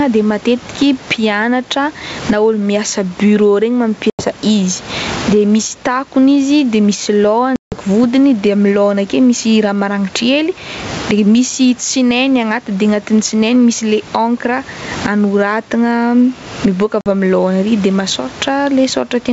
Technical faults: gain pumping; packet loss on an ADPCM call

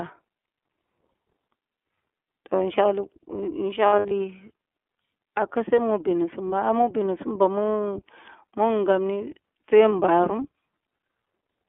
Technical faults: iLBC codec; lost iLBC frames

